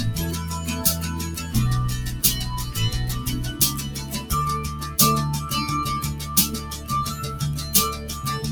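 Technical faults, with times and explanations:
Throughout, noise suppressor applied to music or sounds: a speech-oriented noise suppressor is still active and treats the sustained parts of the sound as unwanted noise. Onsets pass largely intact, but as each held portion or decaying tail continues, the processor pulls its level down, swinging by about 5 dB. The level therefore rises and sinks with the material rather than following it, and sustains and ambience come across thinned and unsteady.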